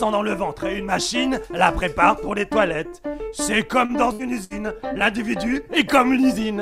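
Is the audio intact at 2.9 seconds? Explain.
Yes, the audio at 2.9 seconds is intact, with no dropout, click, distortion or other fault at that point.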